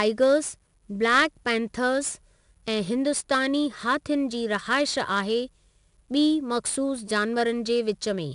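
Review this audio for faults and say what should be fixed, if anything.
A gritty hiss rides on every loud stretch of speech for the whole clip, with roughness on sharp onsets and nothing above 10.6 kHz. That is 4-bit ADPCM compression, which fits an 88 kbps stream: each sample is coded as a coarse 4-bit step from a prediction, leaving level-following quantisation noise and lagging on fast attacks. Keep a linear PCM or higher-resolution master and avoid ADPCM for this material.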